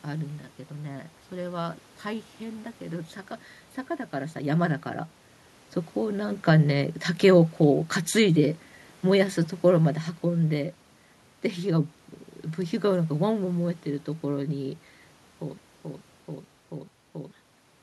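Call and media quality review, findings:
Level sags by about 4 dB from 7.65 to 10.7 s, room noise dropping along with speech. Automatic gain falling: AGC judged input too loud or background too strong for its starting gain, and pulled gain down over those three seconds.

Broken-record loop at 15.58–17.31 s: a 434 ms fragment repeats back to back 4 times, replacing the audio due there. Likely stall in player, encoder or stream, resending its last held buffer. Separate from the level shift near 15 s.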